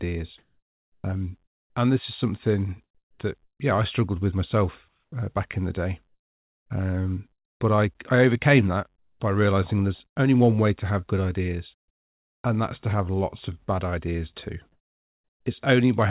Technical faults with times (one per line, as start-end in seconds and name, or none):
0.38-7.60 sound chopped by the voice detector
8.96-10.16 comfort noise in place of the background
11.74-12.44 comfort noise in place of the background
14.72-15.46 comfort noise in place of the background